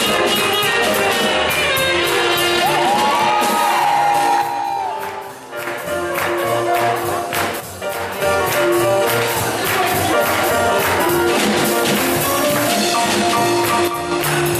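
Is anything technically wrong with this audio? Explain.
Yes. One channel drops out at 4.42–5.67, 7.60–8.22 and 13.88–14.11 s: the level falls abruptly by about 6 dB, likely because one stereo channel is lost before the mono sum.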